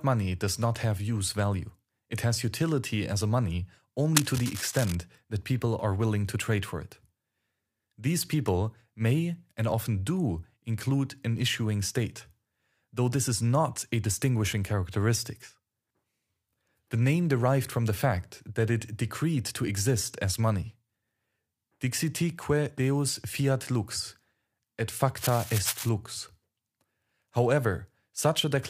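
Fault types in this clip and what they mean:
Cable scratch noise: a worn cable, connector or control that carries a DC voltage was likely disturbed, making its contact resistance flicker quickly and inject dense, irregular bursts of noise. Here it sounds like scratching or rustling laid over the speech twice. The first runs from 4.15 to 4.95 s, just before "that people are willing", at around 5 dB below the speech. The second runs from 25.18 to 25.89 s, just after "deus fiat lux et", at around 10 dB below it.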